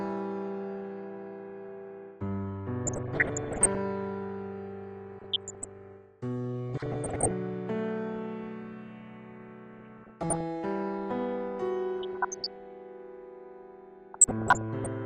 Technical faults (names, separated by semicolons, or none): DAB burbling